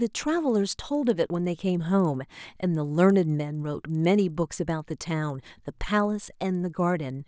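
A buzz at 20 Hz runs under the speech from start to finish, vanishing in pauses. It comes from a resampler restarted on every block: each 50 ms block was converted from 24 kHz to 16 kHz in isolation, leaving a small error at every block edge.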